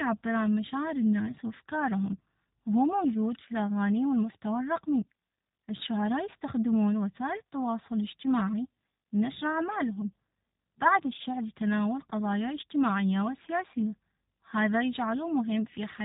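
Throughout the speech, G.729 codec damage is plainly audible. Nothing passes above 3.8 kHz. The pulse-built rebuild sounds rough and synthetic, which fits an 8 kbit/s rate.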